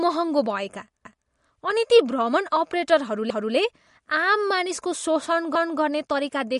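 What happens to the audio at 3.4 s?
From 3.30 to 3.55 s the audio hits an overlapping-chunks fault. The next chunk began before the previous one ended, so 250 ms plays twice, heard as a stutter at the join. A dropout would leave a gap; here material repeats. The join fits 2-second chunks.

Throughout this moment, as across the clip, the sound is plainly watery and swirly, with nothing above 11.2 kHz. The likely cause is MP3 compression at a low rate around 48 kbps. A plain low-pass filter would only dull the treble, without the shifting, bubbling texture.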